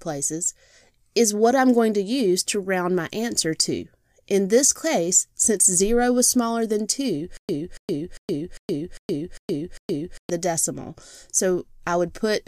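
From 7.37 s to 10.30 s the audio falls into a stutter with silent gaps. A fragment of about 282 ms plays, then stops dead. Roughly 118 ms of digital silence follows. The same fragment comes back, seven times in all, at a steady pace of one burst every 400 ms. Nothing new is heard until it clears. The likely cause is a stalled player or stream replaying its last buffered piece on each retry, so the audio meant for that stretch is lost.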